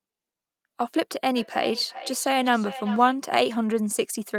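From 1.36 s to 3.23 s the speech comes back as feedback echo between two devices: a second device in the same room plays the call aloud, and the first microphone catches it again, outside the reach of its own echo canceller. The returning copy arrives roughly 0.4 s late, peaking about 14 dB below the direct speech. Unlike room reverberation, which smears sound continuously, this is a distinct, delayed repeat at a steady interval.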